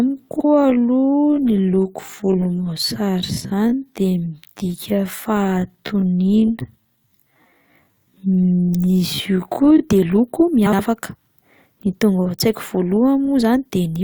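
From the start to about 9.8 s the speech crawls along at roughly 0.57 times normal pace while the pitch stays put. That's likely a time-stretched section, with software repeating short slices to pad it out. The pace snaps back after 9.8 s.

Frames out of order show up at 0.35 to 0.45 s, 3.32 to 3.37 s and 10.66 to 10.80 s, with swapped halves of about 43, 21 and 64 ms. Neighbouring runs of frames were decoded in swapped order, so each spot is a quick garbled flutter, and no time goes missing.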